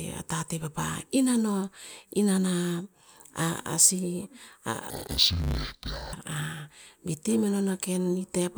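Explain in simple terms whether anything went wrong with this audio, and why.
Between 4.90 and 6.14 seconds the speech turns dull and robotic, with a steady buzz running underneath it. This is interleaved audio read as planar. The left and right samples arrive alternated in short chunks, but each 10 ms chunk was split down the middle instead, so every chunk is chopped and replayed oddly. That repeats 100 times a second, which is the buzz you hear. Unlike a simple pitch drop, the voice doesn't clearly sink an octave.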